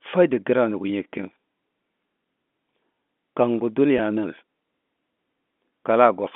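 At 3.98 s the speech briefly holds and turns slightly buzzy for about 10 ms, then carries on. This is packet loss with pitch repetition: a gap that fits a single lost packet was bridged by repeating the last pitch period, heard through the narrow G.711 telephone band.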